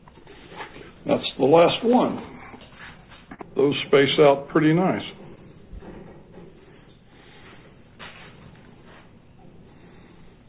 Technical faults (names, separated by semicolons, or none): repeated stalls (stutter)